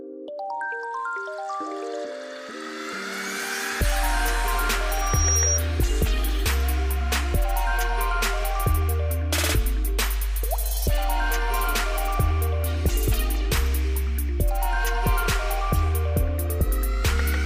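From 4.89 to 5.61 s, a loudspeaker feedback squeal rises at 5.7 kHz over roughly 0.4 s, ending about 5 dB above the signal. It is a single steady pitch that grows by itself, unlike a brief click or burst.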